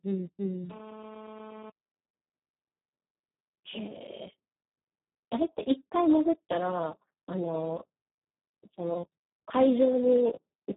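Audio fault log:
Throughout: Speex codec damage, and it's heavy. The speech sounds hoarse, noisy and close to robotic, the way CELP gets when it's starved of bits for the excitation. Nothing survives above 3.8 kHz, and the rate points to roughly 4 kbps, down near vocoder territory.
0.70 to 1.70 s: GSM phone buzz. There's a hard, raspy buzz at 217 Hz with a stack of harmonics, sitting about 17 dB under the speech and paying no attention to it. It holds steady for that second, which fits a nearby phone on a call whose radio bursts are getting rectified into the audio path.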